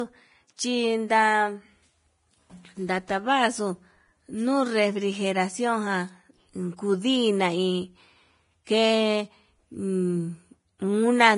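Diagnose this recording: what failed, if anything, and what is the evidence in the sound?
The codec stage is the likely culprit: throughout the speech, nothing reaches above 10.6 kHz, and the treble turns hissy and grainy with smeared consonant attacks. That is heavy Vorbis compression, around 28 kbps. Coarsely quantised residue becomes noise, unlike a plain low-pass filter, which would sound clean but dull.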